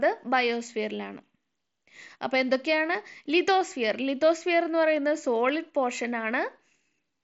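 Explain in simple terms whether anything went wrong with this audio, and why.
Nothing went wrong; this speech recording has no faults.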